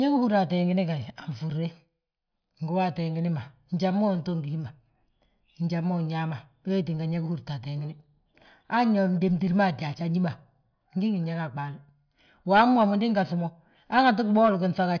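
No technical faults can be heard at any point in this speech recording. The signal runs on without any break or audible damage.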